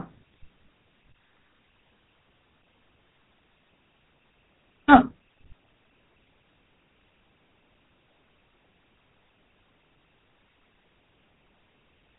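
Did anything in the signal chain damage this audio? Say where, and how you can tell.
Yes: GSM full-rate codec damage throughout the speech, with a buzzy, gravelly roughness and nothing above 3.8 kHz, which fits 13 kbps pulse-driven vocal-tract coding.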